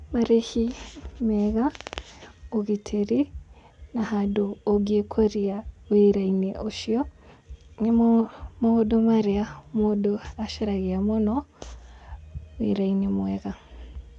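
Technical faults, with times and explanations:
The speech signal shows no technical faults that can be heard.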